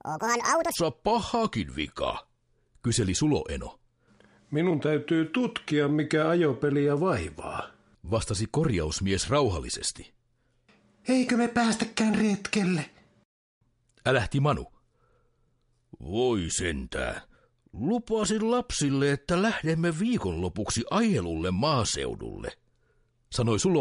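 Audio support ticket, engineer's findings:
Wrong sample rate, 0.0–0.75 s: playback clock likely double the source rate, consistent with 22 kHz material played at 44.1 kHz. Sound runs 2x fast, pitched up 12 semitones.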